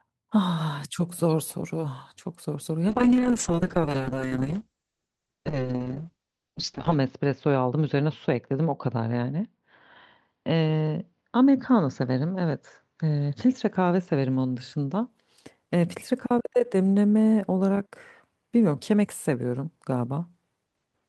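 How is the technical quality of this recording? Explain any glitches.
The quality is compromised by a call bitrate drop lasting from 2.89 s to 15.15 s. The call's bandwidth estimate fell and the encoder was pushed from a rate consistent with around 32 kbps down to something nearer 6 kbps. It spent about 4.05 s at its lowest. With so few bits, the speech is coded coarsely and the audio bandwidth shrinks from 20 kHz to 8 kHz. The result sounds muffled and rough, with a watery texture, until the bitrate recovers.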